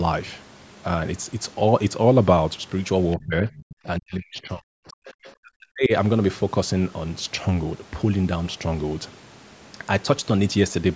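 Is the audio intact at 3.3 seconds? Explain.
No. From 3.16 to 3.51 s the speech is hit by what is likely speech suppressed in double talk. The level sinks by roughly 25 dB, about a fifth of a second in total, as if the canceller mistook its own talker for loudspeaker echo while the far side spoke. Unlike a packet-loss dropout, the voice is turned down by the canceller rather than lost in transmission.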